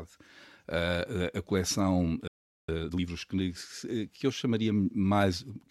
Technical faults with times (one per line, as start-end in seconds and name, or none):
2.27-2.69 playback stall
2.69-3.09 time-compressed catch-up